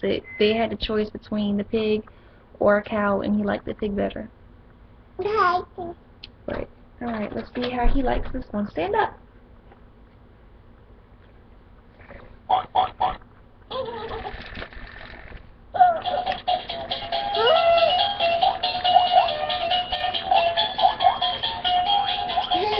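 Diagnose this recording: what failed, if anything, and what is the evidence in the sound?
One channel drops out from 19.95 to 20.00 s. The mono sum falls abruptly by about 6 dB. The likely cause is an intermittent analogue wiring contact.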